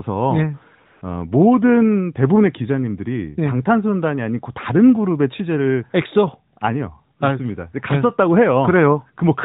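It's a speech clip carried over a narrowband mobile link that sounds like AMR-NB, with everything above 4 kHz gone and light coding damage that fits the 12.2 kbps mode. From 0.86 to 1.02 s there's AMR comfort noise: the phone treated that 160 ms as silence and stopped sending speech frames, so the receiver filled the gap with smooth synthetic hiss that switches in and out, replacing the real background.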